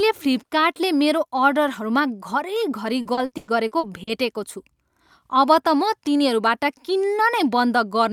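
From about 3.01 s to 4.09 s the speech breaks up with repeated packet loss (robotic sound). Audio keeps going missing, and each hole, up to 100 ms long, gets patched by stretching the last bit of sound. That leaves roughly a third of the stretch rebuilt, so it sounds choppy.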